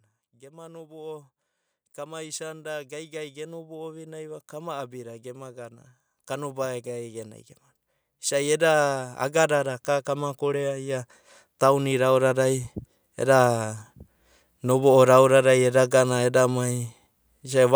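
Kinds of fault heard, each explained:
Automatic gain rising: the gain control decided the input was too quiet and pushed its gain up slowly, so the voice and the room noise behind it swell together rather than the speech alone getting louder. You hear it twice, first from 1.94 to 7.39 s, climbing about 12 dB, then again from 8.28 to 12.72 s, rising about 10 dB, each a long, gradual ramp rather than a jump.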